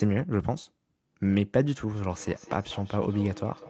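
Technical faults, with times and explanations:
1.93–3.70 s, feedback echo between two devices: from 1.93 s to the end, the speech returns as a thin, ringing copy about every 200 ms, peaking about 19 dB below the direct speech. A second device in the same room is on the call and plays this signal aloud. The first microphone picks that playback up again, and neither echo canceller removes sound from the other device, so each phrase cycles back around the loop at a fixed delay. The repeats share the call's band limit, with nothing above 8 kHz.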